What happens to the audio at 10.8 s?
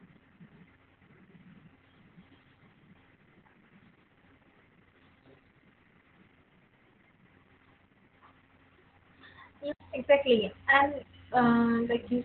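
Opus voice compression is present at 10.8 s, as it is for the whole clip. The speech is squeezed into a narrow band that stops near 4 kHz, and its excitation is coarsely coded by the SILK coder, which fits a very low rate around 8 kbps. The result is heavily muffled, hoarse and slightly robotic.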